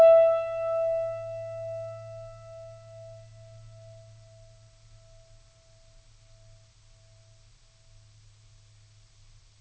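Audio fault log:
Nothing stood out on listening to this music, which comes over a call path with no content above about 8 kHz.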